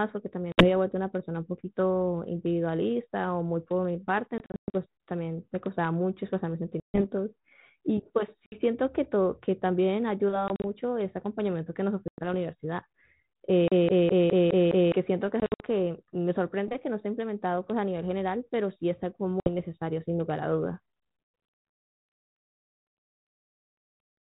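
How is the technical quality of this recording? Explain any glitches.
The recording is marred by two kinds of fault: repeated packet loss on an ADPCM call, and one CD stuck on one turn, all heard through 32 kbit/s G.726 telephone-band audio.

Packet loss on an ADPCM call occurs at 0.52, 4.38 to 4.75 (scattered), 6.8, 8.47, 10.48 to 10.64 (scattered), 12.08, 15.4 to 15.66 (scattered) and 19.4 s, with 60 to 240 ms lost in each. The decoder's predictor and step size lose track, so sound returns slightly distorted. On a waveform these are hard-edged flat gaps.

CD stuck on one turn runs from 13.68 to 14.92 s. The same 207 ms chunk repeats six times with brief mutes, a fast even stutter. A spectrogram shows identical, regularly spaced blocks.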